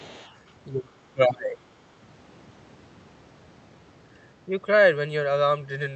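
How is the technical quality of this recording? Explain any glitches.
The recording has two echo-control problems in its first two seconds.

From 0.0 to 0.52 s, the other side's voice is leaking through. A faint second voice, roughly 25 dB below the main speech, sits underneath it. The likely cause is the far end playing on a loudspeaker and the echo canceller leaving a residue in the microphone signal.

From 0.69 to 1.66 s, the speech is suppressed in double talk. The talker's level sinks by up to roughly 25 dB over about 0.7 s in total, so parts of the speech sound ducked. This is likely the echo canceller failing to tell overlapping near-end speech from echo and attenuating both.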